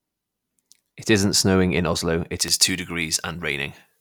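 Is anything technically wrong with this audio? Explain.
Yes, there's one problem. From 2.38 s to the end, the speech has pre-emphasis left on: the treble boost was never undone, so 10 kHz sits about 11 dB above 1 kHz, which fits a J.17 curve. It turns thin, bright and hissy on sibilants.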